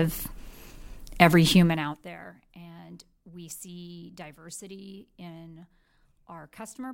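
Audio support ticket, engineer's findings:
Gain ramp stepped instead of smoothed, 1.52 to 2.1 s. Level pulled down about 25 dB in coarse increments, around 70 a second, consistent with per-buffer updates. Each jump clicks, so zipper noise ticks over the speech during the drop.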